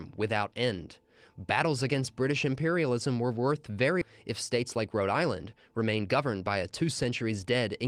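At 4.01 to 4.03 s, just after "imperialism were worth", there is a skip ahead. Roughly a second of speech is missing, and the two sides are spliced together almost directly, with no silence or concealment filling the join. This fits a jitter buffer that overflowed and discarded a block of queued audio so that playback could jump forward to newer packets, cutting the latency by about the same second.

From 4.31 s to 7.85 s, a jitter buffer speed-up follows. The speech runs about 8% fast while the pitch stays unchanged, so the delivery sounds slightly hurried. The receiver is trimming short pitch-period-sized fragments over and over to drain excess buffered audio, removing around a third of a second in total across this stretch to bring the delay back toward its target.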